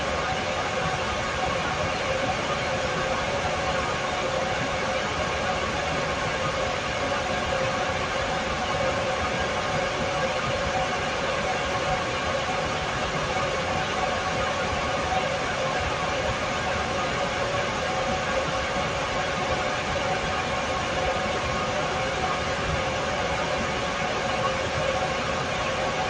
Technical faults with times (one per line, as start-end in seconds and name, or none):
none